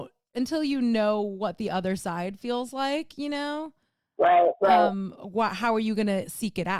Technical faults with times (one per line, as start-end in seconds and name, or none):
none